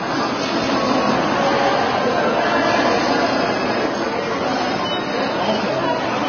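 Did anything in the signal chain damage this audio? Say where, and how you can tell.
Yes, at the codec stage, and it runs the whole clip. Nothing gets through above 6.5 kHz, and the artefacts are layered: a smeary, warbly low-rate texture with crunchier MP3-style swirl on top. That mix most likely comes from transcoding between lossy codecs, with a very low-rate Vorbis encode then re-encoded as MP3 at around 40 kbit/s. The second encoder wasted bits on the first one's debris, and the lower cut-off stuck.

There's a doubled audio track from 0.54 to 3.86 s. A second full-band copy trails the original by about a fifth of a second at roughly the same level. It sounds like a hard, clean slapback with no decay and no room colour, and it switches in and out abruptly. That points to storage or editing rather than acoustics: most likely two copies of the same audio mixed out of step, or a second, slower capture path summed back in.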